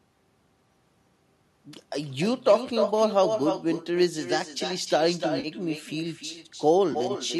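From start to end, the speech has echo with no canceller. Each phrase returns about a third of a second later, about 7 dB quieter and thinner. The far end's loudspeaker feeds its microphone, and nothing strips that copy out before it travels back.

At 5.40 to 5.47 s, AAC frame loss with concealment breaks in. Roughly 40 ms of audio goes missing. The decoder patches it from the last good spectrum, leaving a brief smeared, phasey blur. A shorter patch of the same kind follows at 6.93 to 6.96 s, with about 20 ms lost.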